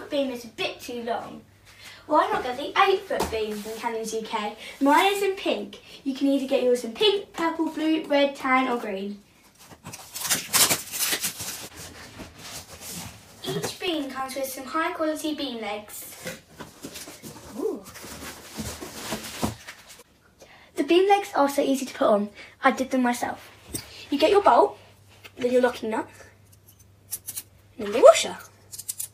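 Between 11.19 and 14.26 s, a background process repeatedly stalls the USB bus or audio driver every 64 ms, causing periodic USB or driver dropouts. Each stall loses roughly half a millisecond of audio, which is replaced by silence. The result is a steady ticking at about 16 clicks per second, several dozen in all, audible only where the audio carries signal, then stopping abruptly.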